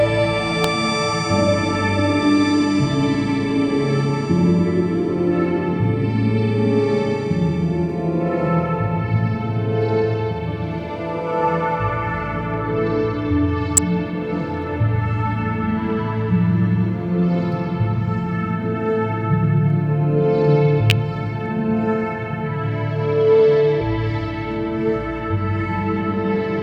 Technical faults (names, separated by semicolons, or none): electrical switching spike